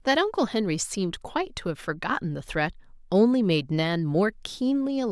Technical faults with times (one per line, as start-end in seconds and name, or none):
none